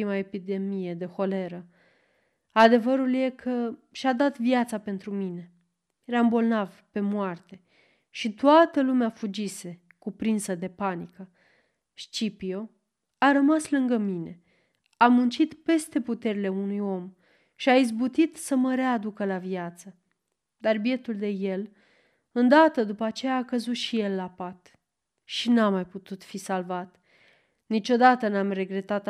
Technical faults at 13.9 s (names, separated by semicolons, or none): none